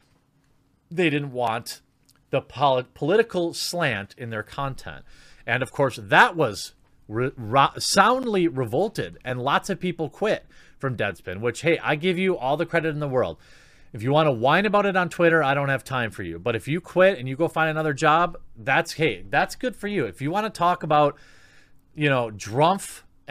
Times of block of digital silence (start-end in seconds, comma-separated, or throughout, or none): 1.47, 8.23